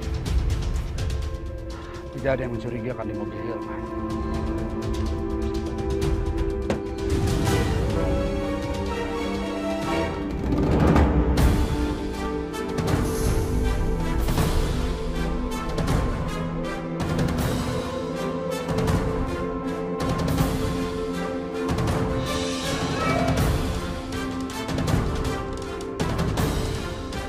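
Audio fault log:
No fault can be heard at any point; the signal stays continuous and steady with nothing interrupting or disturbing it.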